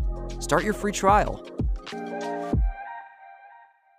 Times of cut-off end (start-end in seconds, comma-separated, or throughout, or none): none